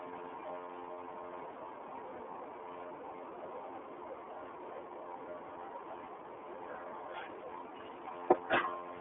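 Right from the start and all the way through, the speech carries the iLBC codec's sound: a narrowband line from about 250 Hz to 3.4 kHz, nothing above 3.7 kHz, and a plainly rough, synthetic edge from each frame being coded on its own, which fits 30 ms frames at 13.33 kbps.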